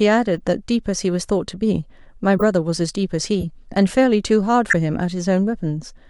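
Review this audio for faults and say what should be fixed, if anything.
Four corrupt frame decoded events occur in the speech, at 0.37–0.40 s, 2.37–2.42 s, 3.40–3.44 s and 4.68–4.73 s, each spanning a few frames and growing louder, from a faint error near -35 dBFS to a loud one near -5 dBFS. Damaged bits are decoded as valid data, so gains and spectral codes land at wrong frequencies. On a spectrogram each shows as a short vertical smear or stray band unrelated to the harmonics. Prevention: add checksums or CRC checks so damaged frames are concealed rather than decoded.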